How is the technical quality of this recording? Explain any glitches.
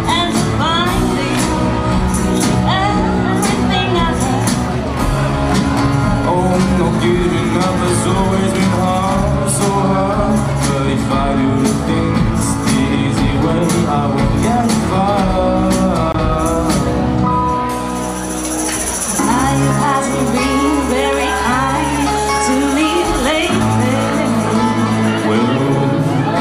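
The recording has one glitch, a block of digital silence at 16.12 s. For about 20 ms the signal drops abruptly to silence and then returns, with no fade on either side. That fits a playback or processing stage that failed to deliver a buffer of samples in time, leaving the gap filled with zeros. At this length, just past the point where a gap would read only as a tick, it comes across as a short hole in the sound.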